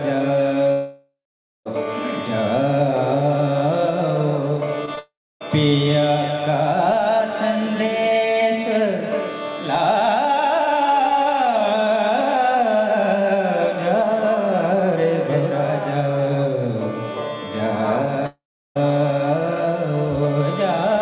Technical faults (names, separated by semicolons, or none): long network dropout; short concealed packet loss